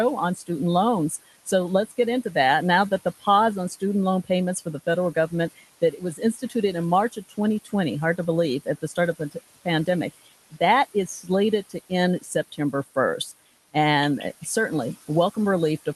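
Noise suppressor artifacts run through the whole clip. The room noise sits about 18 dB below the speech, and the suppressor pulls it down by about 14 dB, band by band. It sinks in the gaps and creeps back under the talking.

Speech cut by the noise suppressor turns up five times. The suppressor mistakes quiet parts of the speech for noise, so soft consonants and word endings get swallowed. The first is at 0.35 to 0.49 s, down by about 15 dB and roughly a tenth of a second in all. The second, at 1.1 to 2.25 s, drops about 12 dB over a similar small total. At 3.05 to 6.54 s it's about 13 dB, around half a second of scattered dips. At 7.12 to 9.88 s it's about 14 dB, roughly 0.4 s. The last, at 10.51 to 14.46 s, is about 13 dB, again around half a second.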